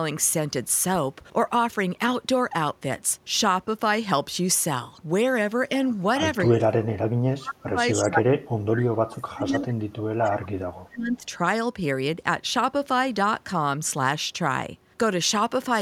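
From 6.45 to 8.83 s and again from 9.1 to 11.24 s, the speech sinks by as much as roughly 35 dB, around two seconds of it in each stretch. This is speech suppressed in double talk, likely an echo canceller mistaking this talker for loudspeaker echo and turning both down.

Within the second stretch, from 9.68 to 9.73 s, a brief delayed copy of a voice arrives 254 ms late, about 25 dB below the speech. This echo leak is likely loudspeaker sound that the canceller failed to remove, sent back.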